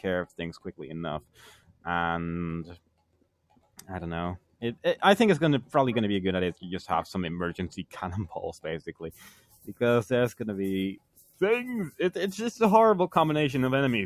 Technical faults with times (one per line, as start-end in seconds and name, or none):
0.00-14.05 noise suppressor applied to music or sounds
1.21-1.86 sound cut by the noise suppressor
2.70-3.86 sound cut by the noise suppressor
4.39-4.84 sound cut by the noise suppressor
8.86-9.76 sound cut by the noise suppressor
10.97-11.41 sound cut by the noise suppressor